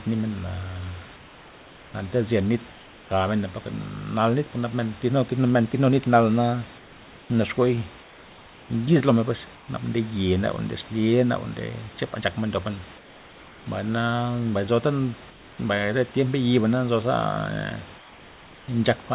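Speech over a call path limited to 4 kHz has comfort noise in place of the background in seven pauses: 1.16–1.94, 2.72–3.1, 8.02–8.7, 9.56–9.68, 12.98–13.66, 15.3–15.58 and 17.98–18.68 s. The likely cause is discontinuous transmission, with the receiver synthesising filler during silence. The real room background, sitting about 25 dB below the loud speech, gives way to a flat, featureless hiss about 2 to 3 dB quieter.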